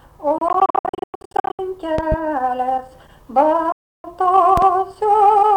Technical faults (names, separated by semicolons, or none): Bluetooth dropout; loud pop